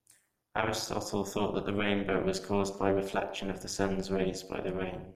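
Overlap-add ripple throughout: frames rejoined with uneven overlap gain pulse about 60 dB deep around 200 times a second, a robotic buzz, not slow tremolo.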